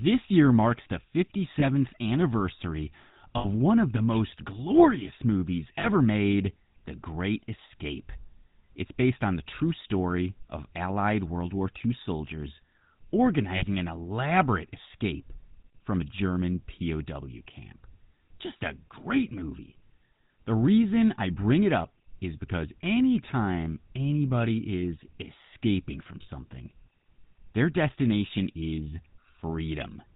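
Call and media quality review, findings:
GSM full-rate codec, whole clip. Buzzy, gravelly roughness on the speech, plainly audible, nothing above 4 kHz. Sound fits the 13 kbps full-rate codec: vocal-tract model driven by sparse regular pulses, excitation kept at one sample in three.

Lost GSM frames, five dropouts: 1.6 to 1.65 s, 3.38 to 3.46 s, 5.8 to 5.88 s, 13.56 to 13.64 s, 26.22 to 26.29 s. Brief rough, metallic ring, roughly 20 to 60 ms. Concealment repeats last good frame's parameters.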